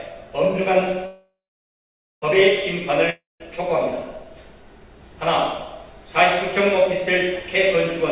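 A call audio freeze runs from 1.06 to 2.24 s, likely because packets stalled in transit until the jitter buffer drained. The receiver stretches the last sound into a fading buzz that settles into about 0.88 s of silence. When delivery resumes, the audio picks up exactly where it stopped, so nothing is lost, but everything after it now plays about 1.16 s late. A long network dropout follows from 3.10 to 3.42 s, likely from packets that never arrived at all. Again a brief decaying buzz fills the hole before about 0.18 s of silence, but this time the audio resumes further along, with roughly 0.3 s of material gone. Both events sit in a call path whose band stops at 4 kHz, a dull telephone-like top end that points to G.711 A-law coding.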